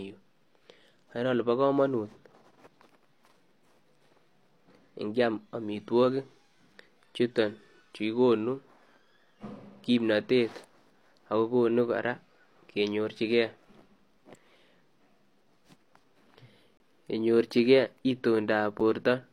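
Right after "ingiam amitwagiik" at 6.74 s there's a gap between stream segments. Two 2-second chunks don't quite meet in time, so the player pads with 5.3 ms of silence. Same hard-edged dropout at 16.77–16.80 s (27.3 ms) and 18.80 s (8.1 ms). No audio is lost.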